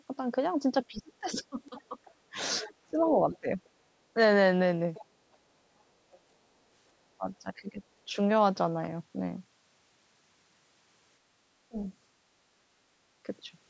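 From 0.88 to 3.6 s the speech dips, for about a second and a half in total, sinking by about 20 dB at its deepest. This is speech suppressed in double talk: the echo canceller likely could not separate this talker from the loudspeaker echo and turned both down. The same pumping returns from 7.18 to 8.17 s, costing around half a second with drops of about 15 dB, and again briefly at 11.7 s, with a sharp dip of about 25 dB.

Overlapping the first dip, from 1.65 to 3.69 s, a second voice sits about 15 dB under the speech. This is the other side's voice leaking through: the far end, likely played on this device's loudspeaker, was not fully removed from the microphone. Short scraps of it recur at 4.94 to 5.05 s, about 25 dB down, and at 6.11 to 6.19 s, faint at about 35 dB down.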